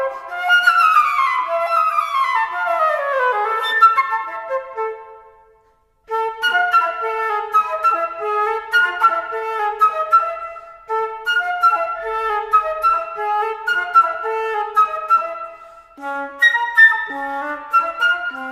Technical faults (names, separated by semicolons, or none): none